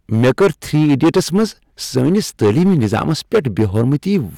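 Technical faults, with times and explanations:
Throughout, hard clipping: the speech is driven about 12 dB past what the stage can pass, so roughly a tenth of the samples are cut flat. Those squared-off peaks add high harmonics. Every loud syllable turns to harsh fuzz.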